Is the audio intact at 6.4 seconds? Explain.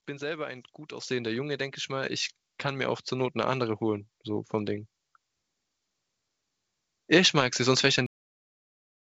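Yes, the audio is intact at 6.4 seconds, with the speech carried cleanly through the call path and only the band limit expected of it, nothing above 8 kHz, which fits a wideband codec such as G.722.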